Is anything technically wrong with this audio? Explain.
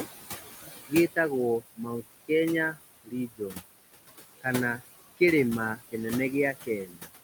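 Yes. Noise suppressor artifacts run throughout: the background room noise, about 12 dB below the speech, is pulled down about 17 dB frame by frame in bands judged steady, so it sinks between the words and rises under them.

Speech cut by the noise suppressor occurs at 1.61–2.03 s (about 18 dB), 3.03–3.62 s (about 22 dB) and 6.85–7.10 s (about 19 dB). The suppressor mistook quiet speech for noise, leaving brief stretches sounding faint or swallowed. These last roughly a tenth of a second in the first span and about a third of a second in the others.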